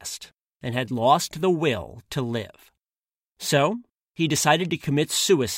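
No technical faults can be heard anywhere in this speech recording.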